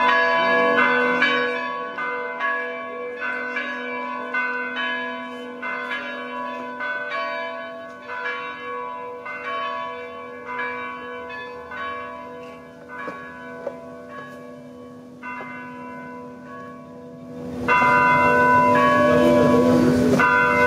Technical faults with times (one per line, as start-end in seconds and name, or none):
0.00-20.66 gain pumping